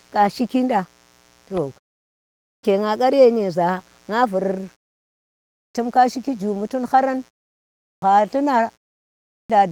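Speech runs through the whole clip over a steady, raspy mains buzz at 60 Hz, about 35 dB below the speech. Sharp switching spikes twice per mains cycle let harmonics climb well above the fundamental. There is also a clipped start after a pause at 2.09, 5.23, 7.54 and 9.03 s. Each time, roughly half a second of sound is lost, from 0.47 to 0.54 s. Every one follows a short pause of 0.32 to 0.55 s. The output device sleeps in the silence and swallows the onset while it wakes. Light Opus voice compression can also be heard.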